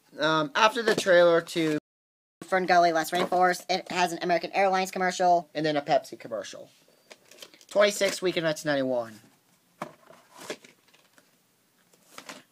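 At 1.78 s the sound halts for about 0.63 s, a playback stall, likely caused by the player running out of buffered data. At 2.42 s the audio resumes.

From 2.42 s to 5.42 s comes catch-up at higher speed. The player rushes through its backlog at 1.15 times normal rate, so tempo and pitch rise together by about two semitones, then return to normal. Pitch drift would wander without speeding up timing.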